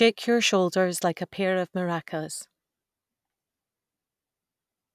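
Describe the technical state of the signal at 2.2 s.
At 2.2 s the speech signal is intact, with no dropout, distortion, glitch or other fault audible at that moment.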